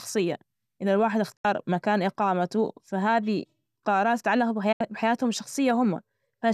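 Speech with two digital broadcast dropouts, at 1.36–1.45 s after "إذا الواحد" and at 4.72–4.81 s after "إقامته فهذى قرارات تتعلق". In each, the receiver muted about 72 ms, which fits roughly three lost frames, with an 8 ms fade. Waveform and spectrogram show short blank vertical gaps.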